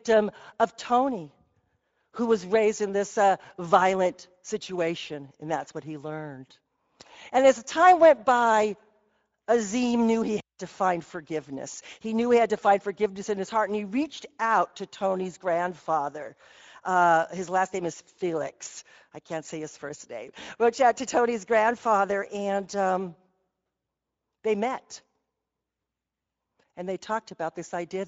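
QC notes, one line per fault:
Throughout: Speex codec. The speech carries a plainly audible rough, hoarse graininess over every phrase, which fits Speex at a setting of roughly 17 kbps. Speex is a CELP coder that models the vocal tract with a filter and spends its remaining bits describing the excitation that drives it. At this rate the excitation gets too few bits to match the original waveform closely, so the coding error comes through as noisy, buzzy texture instead of clean voicing.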